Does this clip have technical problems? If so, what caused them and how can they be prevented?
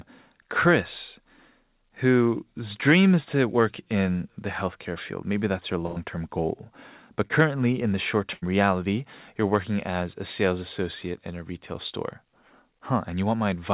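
Yes. Two bursts of packet loss, at 5.86 to 5.98 s (between "that's your" and "term goal") and 8.34 to 8.44 s (between "in the short" and "reality you're working as"), sound like a held buzz or a fading hiss that then jumps ahead. Packets arrived too late or not at all, so the receiver stretched the last sound over about 98 ms and then 79 ms, and about 100 ms and 80 ms of the original audio are gone. A steadier network path with less congestion, or a deeper jitter buffer, would keep these packets from missing their playout time.

Short concealed packet loss at 7.28 to 7.32 s, just before "in the short", is heard as a brief smear or wobble. About 20 ms never reached the decoder in time, so the receiver continued the preceding sound to bridge the hole and then blended back into the real audio. The same network and jitter-buffer measures would prevent it. The band limit at 4 kHz comes from the G.711 mu-law call codec.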